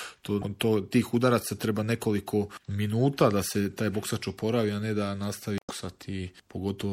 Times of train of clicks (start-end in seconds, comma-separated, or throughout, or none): none